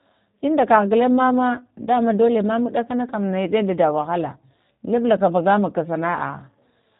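Speech carrying plainly audible G.729 codec damage throughout: a rough, synthetic rebuilt quality consistent with an 8 kbit/s VoIP coder, with nothing above 3.8 kHz.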